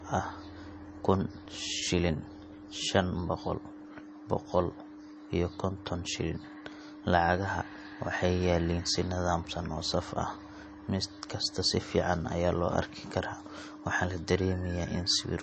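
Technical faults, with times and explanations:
Throughout: low-bitrate audio saved at a high bitrate. The speech was likely squeezed through a low-bitrate MP3 encoder first and then re-encoded at a much higher rate. The second pass cannot restore what the first discarded, so the large file still carries the earlier damage. Nothing survives above 8.3 kHz, which fits a 32 kbit/s MP3 source, and the speech has the dull quality of that first encoding.
11.65 s: dropped buffer (overrun). The recording software likely failed to collect a block of samples before the hardware overwrote it. About 5 ms of audio vanished, and the material on either side was joined directly with no silence between. The speech skips forward by that small amount, and the sudden discontinuity in the waveform is heard as a jump in the sound.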